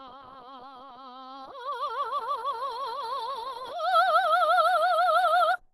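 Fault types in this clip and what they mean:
Opus compression: The music comes through rough and grainy, with a muffled, hoarse edge and nothing above 12.2 kHz, most likely from low-rate Opus encoding. The encoder fills bands it cannot afford with folded or noise-like content, so tones smear into texture, and the sound fits hybrid mode at around 16 kbps. On a spectrogram, a hard ceiling sits at 12.2 kHz with speckled, noisy fill below it. The waveform looks normal.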